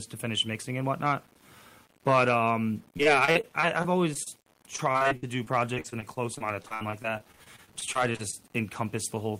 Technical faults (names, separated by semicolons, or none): low bit depth without dither; repeated packet loss (robotic sound)